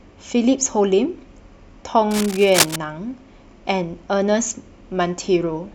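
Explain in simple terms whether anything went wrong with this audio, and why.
From 2.11 to 2.76 seconds, a burst of harsh scratching and rustling sits over the speech for about two-thirds of a second, nearly as loud as the talking itself. This is cable scratch noise. It likely comes from a worn cable, plug or knob being moved while recording: the metal contact inside it briefly touches unevenly, so the electrical connection flickers and sprays rough, irregular bursts of noise into the sound.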